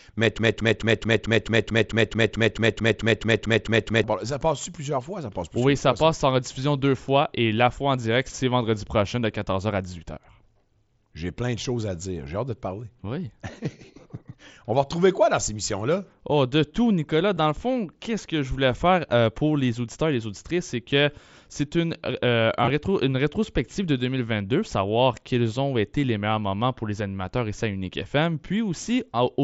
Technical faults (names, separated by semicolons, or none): broken-record loop; concealed Bluetooth headset packet loss